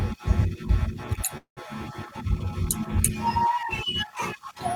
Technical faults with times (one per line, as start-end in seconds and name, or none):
1.37-1.59 call audio freeze